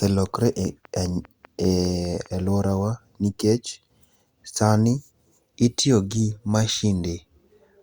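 Speech, with a train of clicks from 0.06 to 2.27 s: about ten regular pulses at 5 per second, roughly as loud as the voice, likely from nearby equipment interference.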